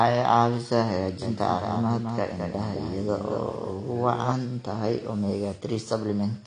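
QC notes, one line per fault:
Throughout: AAC compression. Nothing above 9.8 kHz and plainly audible codec smearing, likely from AAC-LC at a low bitrate, unlike a clean low-pass filter.
1.22–4.32 s: doubled audio track. A full-band copy about 5 dB quieter trails by roughly a fifth of a second. It starts and stops abruptly with no decay or room colour, unlike an echo.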